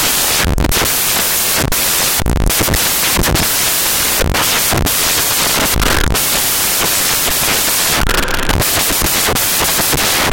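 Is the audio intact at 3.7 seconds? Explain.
No. At 3.7 s, as throughout the clip, samples are built from the wrong bytes. Misassembled bytes push fast-changing low bits into each value, producing loud, harsh broadband noise.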